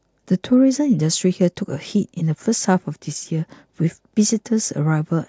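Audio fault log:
Nothing to flag here; the speech comes through without any audible faults.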